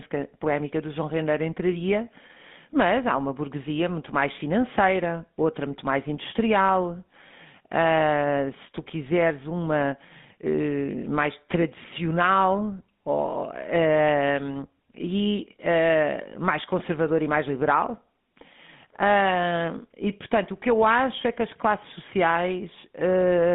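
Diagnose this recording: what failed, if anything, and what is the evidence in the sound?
The fault is at the codec stage: the whole speech recording carries GSM full-rate codec damage. Nothing survives below about 150 Hz or above 3.6 kHz, and voiced sound has a plainly audible buzzy, gravelly roughness from the coarse pulse-train excitation, consistent with the 13 kbps full-rate mode.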